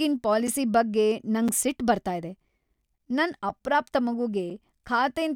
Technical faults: gap between chunks

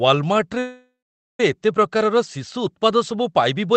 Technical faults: call audio freeze

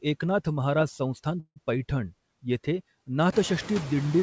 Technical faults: noise suppressor artifacts; call audio freeze

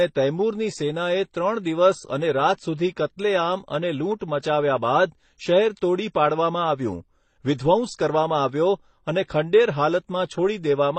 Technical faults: transcoding between lossy codecs

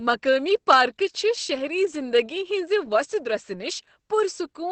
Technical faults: Opus voice compression

